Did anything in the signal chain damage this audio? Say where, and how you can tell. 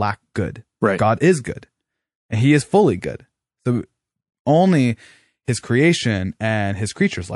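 Yes, MP3 compression throughout: the speech sounds watery and swirly with dulled treble, likely from the codec stage at a low bitrate, around 48 kbps.

Pre-echo at 5.45 to 5.48 s, just before "his creation": a hiss about 11 dB up precedes the attack, since the codec spread its noise across a 48 ms block without switching to short blocks.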